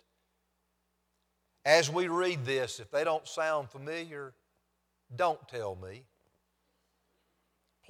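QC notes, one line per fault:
The speech signal shows no audible technical problems anywhere in the recording.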